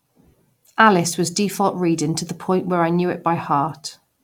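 No technical faults can be heard anywhere in this speech recording. Nothing along the way drops out, repeats, clicks or changes in level or pitch.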